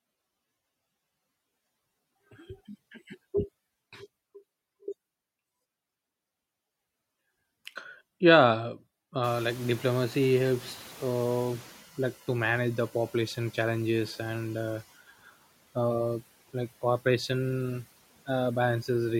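At 9.23 s the noise suppressor is caught catching up. The room noise jumps by about 24 dB at roughly 9 s, and the suppressor's estimate of the background lags behind that jump. For a short stretch the louder noise passes with little reduction, settling about 20 dB below the speech. Over the 2.58 s that follow, the estimate adapts and the background sinks by about 7 dB, so the background noise audibly fades down until it levels off at 11.81 s.

Between 15.07 and 15.34 s, speech is cut by the noise suppressor. The suppressor mistakes part of the speech for background and attenuates it together with the noise, dropping it by about 17 dB at the deepest point. Only around 150 ms within that span is affected, but the quieter detail there is pulled down hard, so soft sounds or word endings come across as swallowed and faint rather than cleanly ending.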